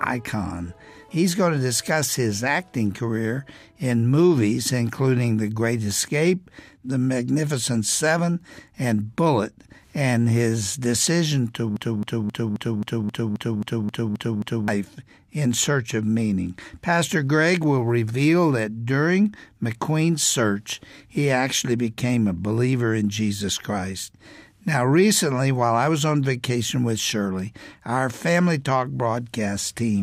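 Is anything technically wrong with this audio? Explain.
Yes. There is a broken-record loop from 11.77 to 14.68 s. A fragment about 0.27 s long repeats exactly, back to back, 11 times. The audio stutters in a rigid mechanical rhythm, roughly four repeats per second, then jumps ahead. The likely cause is a stall in the player, encoder or stream, which kept resending the last piece it held. Whatever should have played during those three seconds is gone.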